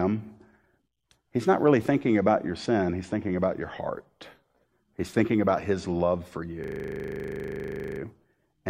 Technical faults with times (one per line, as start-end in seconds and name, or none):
6.64-8.00 system hang loop